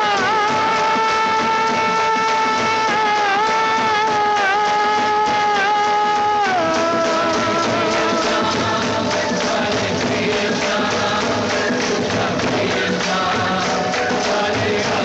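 No technical faults can be heard anywhere in the recording; the signal holds steady and continuous throughout.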